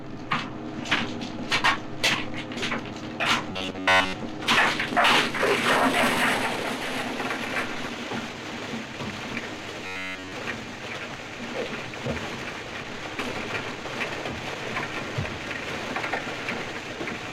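From 3.52 to 4.14 s and again from 9.86 to 10.32 s, there's robotic sound from repeated short buffers: a stiff metallic buzz at 93.8 Hz. It's likely a 10.7 ms chunk looping over skipped audio, covering most of the first stretch and all of the second.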